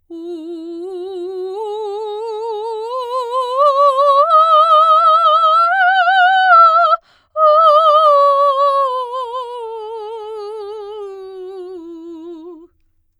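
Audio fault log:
5.82–7.64 s, channel delay (comb filtering): one channel ran a couple of samples late before both were summed to mono. Shared content then cancels at evenly spaced frequencies from around 10 kHz upward, leaving the music's top end dull.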